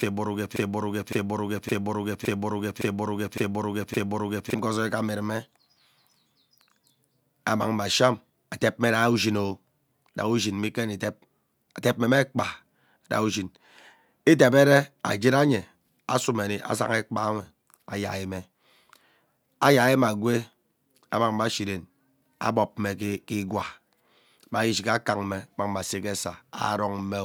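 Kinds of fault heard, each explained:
Broken-record loop: From the very start, already under way, until about 4.54 s, one fragment of speech about 0.56 s long plays seven times back to back with no variation. This most likely comes from a stall that kept resending the last held fragment, and the speech that should have filled those seconds is lost. On a spectrogram it appears as identical blocks repeating at a fixed 0.56 s spacing, and the waveform shows the same envelope copied end to end.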